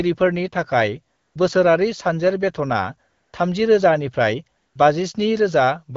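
AMR comfort noise fills three gaps, at 1.15 to 1.35 s, 3.09 to 3.33 s and 4.57 to 4.75 s. Each time, the phone judged the talker silent and stopped sending speech frames. The receiver played smooth synthetic noise instead. The real background drops out, then snaps back.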